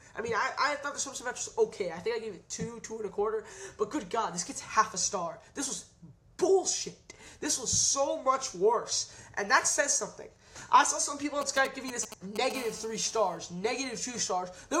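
A nearby 2G phone sending signalling bursts is picked up and rectified by the audio circuit from 11.42 to 12.52 s. These GSM signalling bursts come through as a galloping dit-dit-dit of short 217 Hz buzzes, roughly 10 dB below the sound.

From 12.55 to 13.37 s the phone moves into a call and transmits in bursts 217 times per second, which the circuit again demodulates. This GSM phone buzz is a steady, hard, raspy 217 Hz tone with many harmonics, about 18 dB below the sound.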